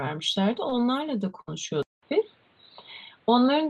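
Short concealed packet loss at 0.69 to 0.73 s in this speech recording leaves a brief smear. About 20 ms of audio never arrived in time, so the receiver extended the preceding sound to cover the hole and then blended back into the real signal. A burst of packet loss follows at 1.41 to 1.49 s. Roughly 60 ms went missing in a row, and the decoder stretched the last sound while fading it, producing a short held buzz or hiss before speech resumes further on, with the lost stretch gone. From 1.83 s to the end, the sound turns dull and boxy after a 200 ms silence, with nothing above 4.5 kHz, a new background noise floor roughly 35 dB beneath the speech, and no obvious jump in loudness. This is most likely the input switching to a poorer device, such as a headset's call profile.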